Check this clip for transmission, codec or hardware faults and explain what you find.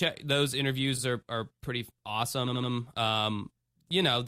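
Two stutters from repeated frames are audible in this speech clip. At 0.97 to 1.01 s, a 40 ms block plays twice, which fits a run of about two compressed frames being written or sent a second time, so the decoder simply renders the same slice again. At 2.47 to 2.71 s, an 80 ms block plays four times in a row, adding 240 ms. Each replay is heard as a brief stutter.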